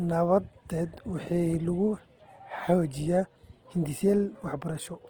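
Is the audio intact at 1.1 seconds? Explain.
No. At 1.1 seconds the speech carries the same damage heard through the whole clip, and it's likely Opus compression. The high end still reaches about 20.2 kHz, but the detail inside the bands sounds rough and grainy, as though the encoder kept each band's energy and had to fill in the fine structure by copying lower bands or adding noise. It's plainly audible, and the coarseness fits a low rate of around 16 kbps in Opus's music mode.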